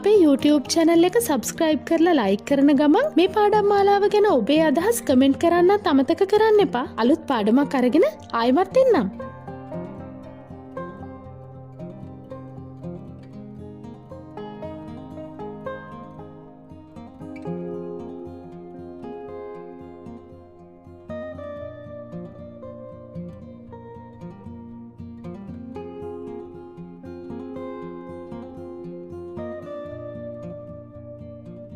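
No technical faults can be heard anywhere in the recording. Nothing in the sound points to any problem in the chain that carried it.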